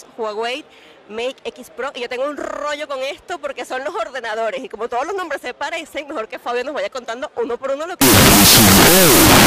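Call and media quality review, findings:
Wrong sample width, 8.01 s to end: loud noise with the original buried in it, playing at half speed and lower pitch. 16-bit samples read as unsigned 8-bit, likely in decoder or format handling.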